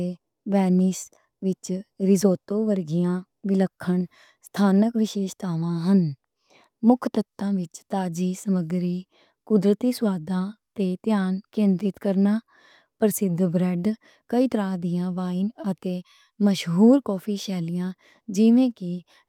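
Speech recording with no audible technical faults: no dropouts, clipping, glitches or level problems anywhere in the clip.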